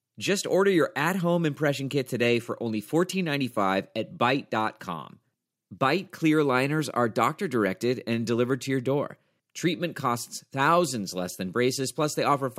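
No technical faults can be heard anywhere in the speech recording, and the signal stays continuous and intact throughout.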